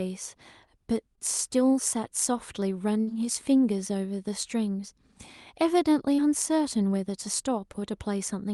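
At 3.01 s a burst of packet loss interrupts the speech: about 60 ms of audio arrived too late or not at all, and the receiver stretched the last sound it had across roughly 59 ms, lowering its level as the gap ran on until 3.09 s. A voiced sound turns into a short held buzz, a breathy one into a fading hiss, and the speech resumes slightly ahead with that stretch missing.

Between 7.72 and 7.76 s a short concealed packet loss leaves a smaller hole of about 20 ms. The decoder filled around 18 ms of it by continuing the preceding sound, from its pitch if voiced or as shaped noise if not, and then blended back into the real signal. This is heard as a brief smear or wobble, and a quick consonant there may drop out. Both fills carry the call path's Opus coding at 48 kbps, whose top end stops near 12 kHz.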